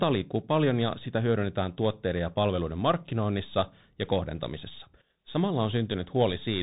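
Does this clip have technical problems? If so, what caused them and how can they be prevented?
Yes. The speech throughout carries Bluetooth CVSD headset codec damage: nothing above about 3.8 kHz, and plainly audible coarseness from one-bit up/down step coding, consistent with a 64 kbps CVSD link. Prevent it by recording locally or over a wideband link instead of the headset's narrowband voice mode.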